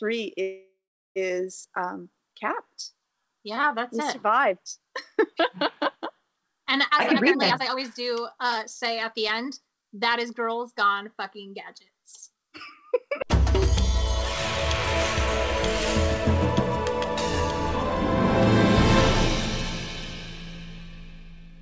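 From 0.42 to 1.18 s the sound stalls into a fading buzz, silent for its last 0.38 s, then resumes. This call audio freeze likely came from delayed packets draining the jitter buffer, adding 0.74 s.

Between 6.89 and 10.35 s the sound hurries at 121% speed with unchanged pitch. This is a jitter buffer speed-up, trimming roughly 0.7 s of pitch periods to cut the built-up delay.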